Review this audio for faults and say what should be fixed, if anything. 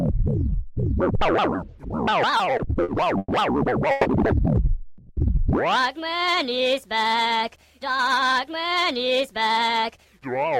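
Repeated stalls (stutter) run from 2.37 to 3.31 s: five short gaps, the longest 110 ms, are filled by stretching the preceding sound as late packets leave the jitter buffer empty. Unlike a single freeze, the sound drags in a broken rhythm.

Two call audio freezes occur at 3.91 s (140 ms) and 4.88 s (210 ms). Each time the sound hangs as a fading continuation and then resumes where it stopped, likely because packets were held up. Unlike the stutter, each is one held gap.

A jitter buffer speed-up runs from 8.36 s to the end. The sound plays at about 108% with its pitch unchanged, as roughly a fifth of a second of tiny pitch-period slices is cut to shed excess delay. Unlike a resampling error, the pitch stays put.

Steadier network delivery and a larger, more gradually adapting jitter buffer would prevent all three.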